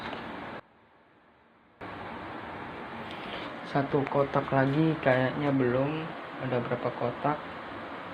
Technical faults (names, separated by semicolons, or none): one channel inverted